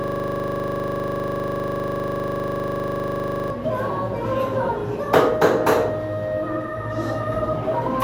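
A system hang loop is already under way when the audio begins: the computer or driver has frozen, leaving the sound hardware to replay one 40 ms stretch of its ring buffer. Until 3.50 s, that exact repetition produces a steady, rough buzz at 25 Hz.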